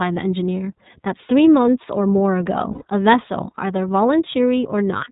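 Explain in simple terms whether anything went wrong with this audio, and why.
Two things went wrong. The whole recording has passed through the iLBC codec, a narrowband phone-call codec that squeezes speech into 30 ms chunks and discards everything above 4 kHz. That is why the speech sounds muffled and thin, with a plainly audible rough, slightly synthetic edge. The codec models the voice instead of storing the actual waveform, and that shortcut leaves the rough texture you can hear throughout.

The second problem is a burst of lost iLBC frames from 2.72 to 2.83 s, a gap that matches about three 30 ms frames. When data went missing, the decoder filled the hole by repeating the last stretch of voice with noise mixed in, so that moment sounds like a brief held, buzzy vowel. Each iLBC frame is decoded on its own, so the speech snaps back to normal right after the gap.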